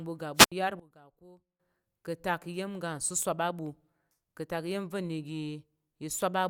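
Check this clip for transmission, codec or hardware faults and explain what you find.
Two faults stand out in the speech, both in the first two seconds.

From 0.35 to 0.52 s there is a wireless microphone squelch dropout. The transmitter's radio signal weakens, a burst of hiss rises as the FM receiver loses lock, and then the squelch gates the output to near silence for about 70 ms before the voice returns. On a spectrogram this appears as a broadband noise smear followed by an empty vertical gap. The waveform collapses to a flat line for that span.

From 0.80 to 1.60 s the voice drops by about 20 dB to a faint copy, then comes back at full level. The likely cause is one channel inverted: with one stereo side in reversed polarity, everything common to both channels cancels when summed to mono, leaving only their small difference. The waveform shows a sharply shrunken envelope.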